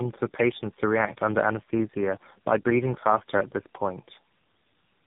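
Throughout the speech there is tandem speech coding: three separate low-rate speech coders in a row, each decoding and re-encoding the damaged output of the one before. The character fits GSM full-rate coding twice, then AMR-NB at 7.4 kbit/s. Each generation compounds the previous errors, so the voice sounds rougher, more muffled and more warbly than a single codec would make it. Nothing is present above 3.8 kHz.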